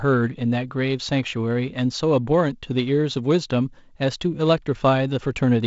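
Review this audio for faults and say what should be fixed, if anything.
No faults found; nothing needs fixing.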